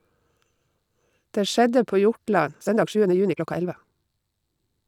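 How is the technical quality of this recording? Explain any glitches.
The recording has one fault. From 2.44 s to the end, a time-stretched section runs at 1.85 times speed, likely squeezed by dropping short pieces, so speech turns rushed at unchanged pitch, with compressed, jagged spectrogram patterns.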